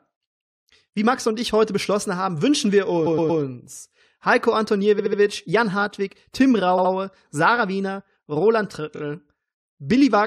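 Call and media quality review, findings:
Stutter: a short stretch of speech plays again.

3.05–3.40 s, just after "beschlossen haben wünschen wir": 116 ms block heard four times.
4.98–5.19 s: 70 ms block, four times.
6.77–6.91 s: 70 ms block, three times.
8.95–9.00 s: 23 ms block, three times.

Repeated frames. Compressed frames were re-sent or rewritten before the decoder. Block lengths fit codec frames of about 23 ms. Added length: about 0.74 s in total.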